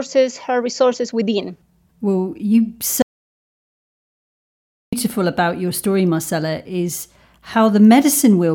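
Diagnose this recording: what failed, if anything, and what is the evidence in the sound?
Audio dropout to silence from 3.02 to 4.93 s: the speech stops abruptly after "resources within well you" and resumes mid-flow at "about your story marcella", leaving 1.9 s of silence with no room tone. The input was likely lost upstream while the recorder kept writing silence.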